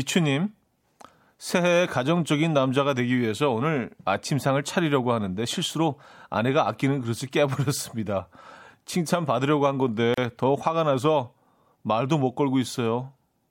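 At 10.14 s the speech drops out abruptly for 34 ms, then resumes exactly where it stopped, with softened edges. This is a gap at a join of encoded pieces: separately encoded segments were spliced untrimmed, keeping the encoder's start delay and end padding.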